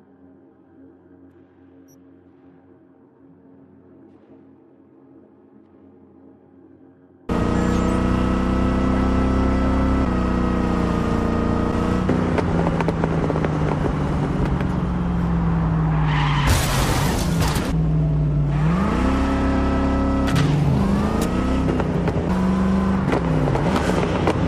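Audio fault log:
Throughout: sample clock jitter, a faint hiss and roughness riding on loud, bright passages, gone in silence; an unsteady converter clock, around a microsecond or two of timing wobble.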